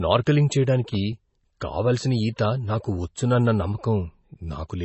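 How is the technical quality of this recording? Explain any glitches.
The technical quality is poor. Heavy lossy-coding damage runs through the whole recording, and one brief pre-echo can be heard.

MP3 compression, throughout: the audio has nothing above 8 kHz and sounds watery and swirly, with smeared attacks. This is likely MP3 encoding starved of bits, which fits a bitrate around 24 kbps. The encoder cuts the treble and lets weak frequency lines flicker on and off between frames.

Pre-echo, at 1.60 s: just before "కావాల్సిన ఈత నాకు వచ్చునన్న", a hiss of about 10 ms arrives ahead of the onset. The codec spread quantisation noise across a block containing a sharp attack, so noise leaks into the quiet moment before it and softens the attack.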